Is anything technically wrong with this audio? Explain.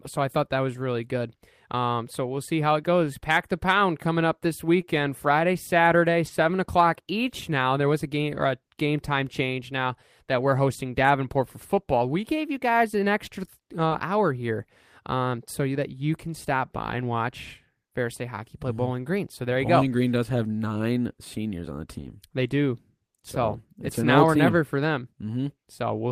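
Yes, there are two kinds of packet-loss fault in this speech.

Short concealed packet loss at 4.81 to 4.85 s, just after "pound coming up this". About 20 ms of audio never reached the decoder in time. The receiver bridged the hole by extending the preceding sound, following its pitch where voiced or using shaped noise where not, before easing back into the real signal. The result is a brief smear or wobble at that point.

Lost packet rebuilt from error correction at 6.27 s (20 ms, just before "o'clock each"), 19.81 s (20 ms), 21.97 to 22.07 s (60 ms, after "nine seniors on the") and 24.47 to 24.53 s (40 ms). The longer stretches fit two or three separate lost packets. In each case the lost audio was recovered from a low-bitrate backup copy carried in the following packet, so there is no gap, but those frames sound rougher and noisier than their surroundings.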